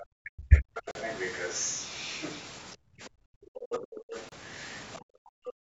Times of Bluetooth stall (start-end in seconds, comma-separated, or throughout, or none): 0.91-0.95, 4.29-4.32